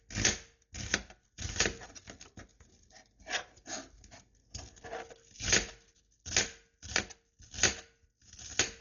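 A recording of everyday sounds, and the whole thing carries heavy Dolby Digital compression damage, likely from an AC-3 style encode squeezed hard, the sort of starvation you'd expect around 40 kbps. Nothing makes it above 7 kHz, so it sounds dull and closed-in. With so few bits, a lot of frequency lines got no real detail and were filled back in with dither noise, which is where that rough, fluttery grit around the tonal parts comes from.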